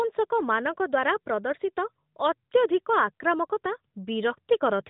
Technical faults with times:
none

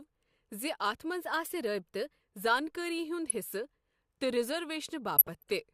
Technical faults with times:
1.21-2.21 drift correction step
5.17-5.52 DAB burbling

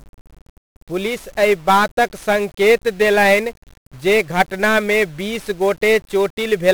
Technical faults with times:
0.00-6.73 1-bit DFPWM compression

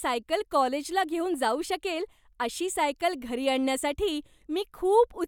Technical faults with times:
none

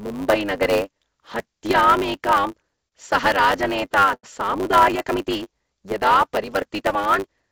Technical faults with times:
0.00-7.51 block size mismatch (truncated)
2.19-2.94 repeated stalls (stutter)
3.34-4.25 repeated stalls (stutter)
6.47-7.43 jitter buffer speed-up

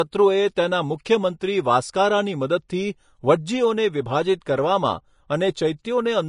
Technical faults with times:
0.00-6.29 Vorbis compression

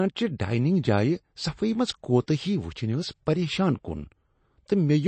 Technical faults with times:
0.00-5.08 MP3 compression

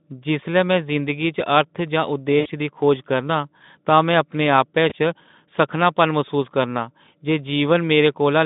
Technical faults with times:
2.39-2.48 VoIP packet loss concealed by the speech codec
4.89-4.93 VoIP packet loss concealed by the speech codec

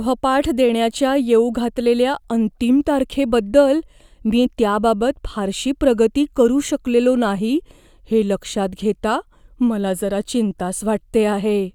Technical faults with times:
none

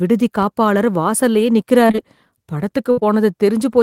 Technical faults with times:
1.87-1.99 short concealed packet loss
2.91-2.99 burst of packet loss
2.99-3.03 short concealed packet loss

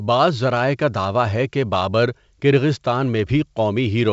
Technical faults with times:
none

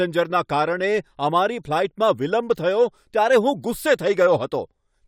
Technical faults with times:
none

